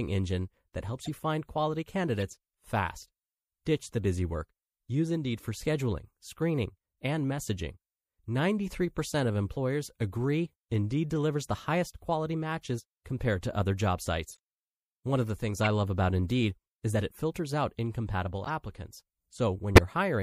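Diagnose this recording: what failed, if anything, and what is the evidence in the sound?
The speech has a watery, swirly quality throughout, with a dulled top end and smeared consonants. The damage is plainly audible and points to the codec stage, likely MP3 compression at a low bitrate, in the region of 64 kbps, starving the high frequencies.

Short chirps and noise bursts interrupt the speech at 1.04 s (between "engine that helps" and "you find quality"), 2.20 s, 14.31 s, 15.63 s (between "of the things" and "love about"), 18.44 s (after "it filters out incompatible") and 19.75 s. This is a corrupt frame decoded: damaged MP3 frames, a few at a time, played with misread data. The bursts at 15.63 s and 19.75 s are the loudest, peaking around -15 and -10 dBFS.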